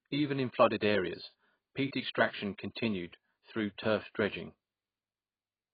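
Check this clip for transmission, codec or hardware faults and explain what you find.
One fault runs throughout: heavy coding damage, likely AAC compression. Nothing remains above 4.9 kHz, which fits AAC-LC at roughly 16 kbps. At that rate the encoder discards the top band and starves what remains of bits, so the speech sounds dull and smeared, with a warbling, fizzy edge on sibilants.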